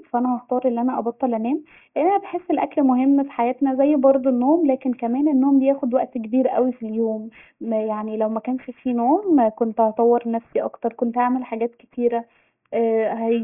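Throughout, the speech was resampled down without an anti-aliasing filter, which points to a drop from 48 kHz to 6 kHz. Aliasing folds content above 3 kHz back into the band at roughly 30 dB below the signal, making sibilants gritty and metallic.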